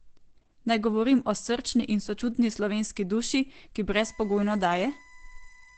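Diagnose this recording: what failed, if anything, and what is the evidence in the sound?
At the codec stage, likely Opus in its SILK speech mode at a rate near 12 kbps: the speech throughout is muffled and hoarse, with nothing above 8.6 kHz.

USB whine on the analogue wiring, where bus current in 1 ms frames leaks through power or ground: a fixed tone at 1 kHz, strongest at 2 kHz, at about -25 dB, from 3.92 s after "sočutni slovenski duši ki" to the end.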